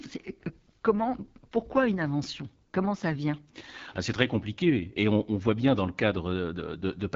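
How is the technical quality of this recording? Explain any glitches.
The recording is held back by plainly audible codec damage across the whole clip. The AMR wideband (HD Voice) codec is audible from start to finish. Speech sounds rough and raspy, and nothing is heard above 7.6 kHz. This points to a low rate, around 8.85 kbit/s.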